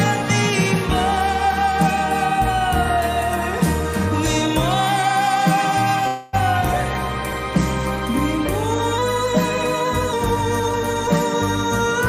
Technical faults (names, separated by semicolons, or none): call audio freeze; drift correction step